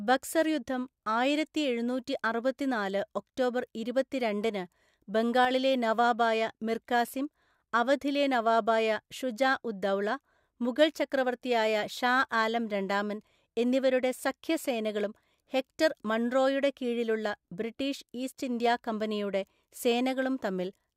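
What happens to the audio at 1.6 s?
Nothing goes wrong at 1.6 s; the speech there is intact, with no dropout, click, distortion or other fault.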